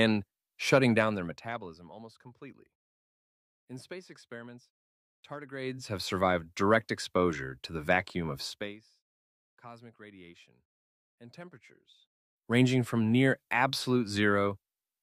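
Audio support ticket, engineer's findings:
Zipper noise on gain moves, 0.93–1.95 s (about 20 dB down), 5.48–5.85 s and 11.98–12.63 s (about 20–25 dB up). Gain is stepped with no smoothing, so every step ticks.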